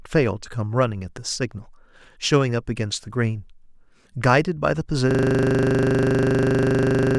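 From 5.11 s to the end, the speech collapses into a rigid, steady buzz: the same 40 ms fragment repeats about fifty times at 25 per second. This is a system hang loop, where the system froze while the audio hardware kept replaying one ring buffer.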